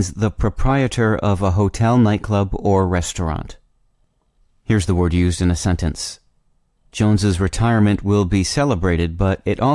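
No technical faults are audible anywhere in the recording.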